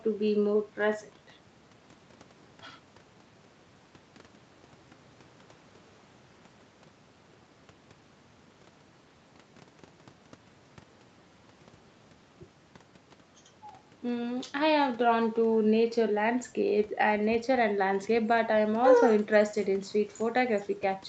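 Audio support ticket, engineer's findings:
No faults found in the speech; the audio shows the expected call-chain character, with the microphone high-pass trimming the lowest bass and the Opus call codec capping content at 8 kHz.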